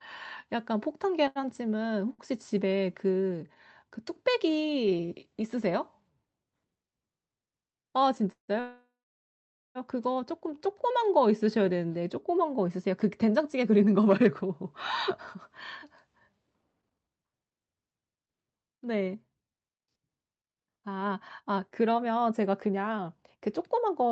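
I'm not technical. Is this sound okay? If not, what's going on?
No. From 1.27 to 2.22 s there are repeated stalls (stutter): four brief hitches, the longest about 81 ms, where late audio made playback pause and stretch.

At 8.32 to 8.51 s and again at 8.60 to 9.78 s there are call audio freezes. The sound hangs, then goes quiet, most likely because the audio was held up in transit.

From 10.54 to 11.31 s a jitter buffer slow-down plays the audio at about 93% speed, drawing sounds out by about 61 ms without changing pitch.

Jitter buffer speed-up follows. From 13.38 to 15.09 s the audio runs slightly fast, about 103%. From 15.84 s to the end it runs about 10% fast, trimming roughly a second and sounding hurried.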